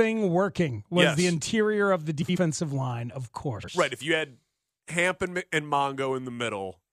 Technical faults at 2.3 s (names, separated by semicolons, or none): frames out of order